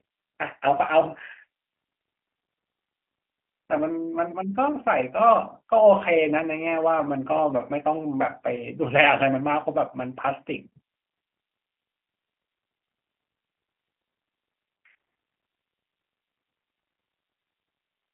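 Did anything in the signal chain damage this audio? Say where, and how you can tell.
Yes. The damage comes at the codec stage: the speech has been through a G.729 codec for the whole clip, and the sound fits an 8 kbit/s G.729A stream. The encoder rebuilds each 10 ms frame from a vocal-tract filter, a pitch predictor and a few pulses, so the speech comes out plainly rough and slightly synthetic. Nothing above 3.5 kHz survives, and the line band of roughly 200 Hz to 3.4 kHz gives it a thin, telephone-like sound.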